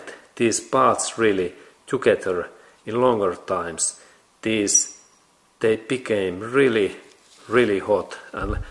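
No dropouts, clicks, distortion or level jumps turn up anywhere in the audio, and nothing in it calls for a fix.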